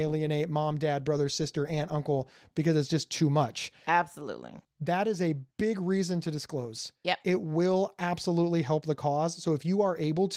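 A speech clip, with nothing technically wrong in it.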